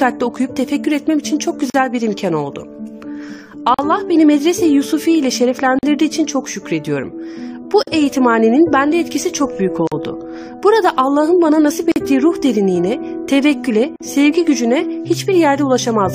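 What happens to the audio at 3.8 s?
At 3.74 to 3.79 s the sound drops into a gap at a join of encoded pieces, a 43 ms silence with smeared edges. Separately encoded segments were joined without trimming encoder delay and final-frame padding. The gaps recur every 2.0 s.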